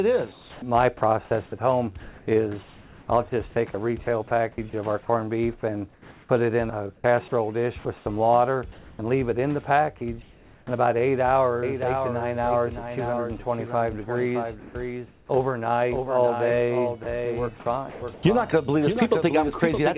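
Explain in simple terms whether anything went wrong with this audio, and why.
Yes, a few things go wrong.

From 0.32 to 10.67 s there's sound chopped by the voice detector. The sender most likely kept switching its transmission on and off, so about 2.4 s of real sound gets swapped for synthetic hiss. It sounds choppy, and the background keeps flickering between real and fake. The same thing happens again from 17.03 to 18.23 s, with about a quarter of a second replaced.

From 11.63 s to the end there's a doubled audio track. A second copy of the same sound trails about three-quarters of a second behind, a bit quieter, with no room echo, so everything seems to repeat itself. The likely cause is the sound being captured twice, once through a slower path.

At 14.6 to 14.75 s, sound is dropped by the voice detector. It likely mistook some quiet sound for background and stopped sending. About 60 ms of real sound is lost and replaced with steady noise until transmission resumes.

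From 14.6 to 15.29 s there's comfort noise in place of the background. The natural background gives way to about a third of a second of flat, featureless hiss. That's likely the receiver filling a pause in transmission with generated noise.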